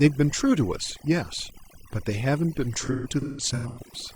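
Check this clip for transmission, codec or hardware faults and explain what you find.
Two faults are present in this speech clip.

Overdone noise removal runs throughout. Bands near the noise estimate are gated off, leaving the background broken into twinkling, warbling specks, and the spectrogram shows scattered specks on a blank background.

AAC frame loss with concealment occurs from 2.82 to 3.79 s. The decoder rebuilds lost frames, the longest run around 150 ms, from the last spectrum, so these patches sound smeared and phasey and show as blurred streaks on the spectrogram.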